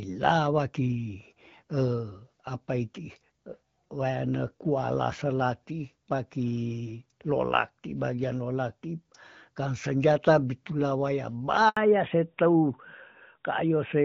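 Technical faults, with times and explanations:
11.69–11.77 s, handover gap: the call switched networks and no speech frames arrived for 80 ms, so the sound cuts out and that stretch is lost.
11.77 s to the end, fallback to narrowband: the call dropped from HD Voice to a narrowband codec, removing everything above 4 kHz, so speech turns duller and rougher.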